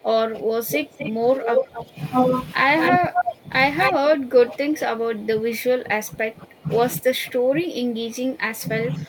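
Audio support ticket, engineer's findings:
Speech suppressed in double talk: level dips of about 15 dB at 0.0–1.98 s and 2.9–3.53 s, about 20 dB from 3.9 s to end; likely echo canceller ducking during overlap. The talker's speech is turned down, with no added copy.

Echo leak: delayed duplicate about 0.25 s behind the speech at 0.7–1.1 s (about 10 dB down), 1.41–1.84 s, 2.8–3.32 s and 3.78–3.94 s (near equal level); likely residual loudspeaker echo passing the far-end canceller. An extra copy is heard, unlike the dips.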